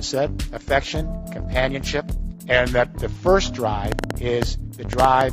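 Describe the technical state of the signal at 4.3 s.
At 4.3 s you're right inside a train of clicks that runs from about 3.92 to 5.22 s: roughly ten sharp, similar pops at around 6.2 per second, unevenly spaced and standing well above the sound, likely from equipment interference or a faulty connection or power supply.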